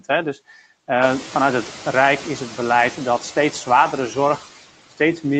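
Noise suppressor artifacts run throughout. The suppressor drops steady noise about 16 dB between phrases. Leftover noise rises under the speech, and the room noise itself rises around 1 s.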